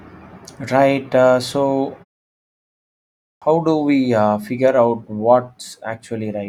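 A short speech recording with a clipped start after a pause. Speech resumes at 3.35 s after a silence of about 1.4 s. The first 66 ms of that returning sound is missing, through 3.42 s. The word begins abruptly, without its opening sound. The playback device appears to have gone idle during the silence. It then needed time to wake and lock again, so the audio arriving in that window was dropped before output resumed.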